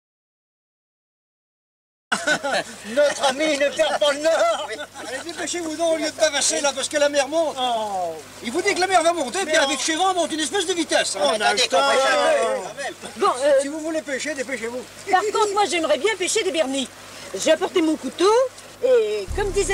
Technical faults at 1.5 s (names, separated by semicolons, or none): audio dropout to silence